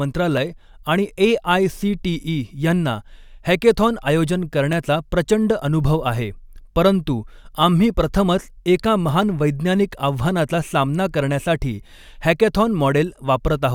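Two devices likely running on separate clocks that disagree by around 300 ppm would let the buffer between them drift until a small block of samples, around 15, is dropped or repeated. That matches the clock drift buffer slips heard here: from 0.37 s to 13.44 s the speech carries a brief click roughly every 1.45 s, about ten in all, each a tiny discontinuity in the waveform where the slip occurs.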